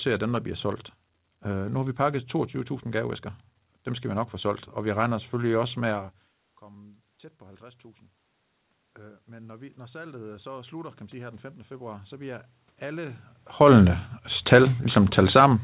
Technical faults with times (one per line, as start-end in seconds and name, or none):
6.59-8.12 automatic gain rising
8.98-13.31 automatic gain rising